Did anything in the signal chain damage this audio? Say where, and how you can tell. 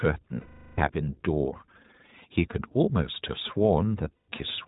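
Yes, two things, both on the codec and network side. The whole clip went through the iLBC codec, and its damage is plainly audible. Nothing gets through above 4 kHz, and the speech has a rough, slightly synthetic edge. That fits narrowband iLBC at 20 ms frames, around 15.2 kbps.

There are also lost iLBC frames, from about 0.40 to 0.80 s and again from 4.13 to 4.29 s. Roughly 380 ms and 160 ms of audio went missing in transit. In each gap the decoder repeated the last pitch cycle with noise mixed in, which gives that held, buzzy vowel sound. Because each frame decodes independently, the speech snaps back cleanly afterward.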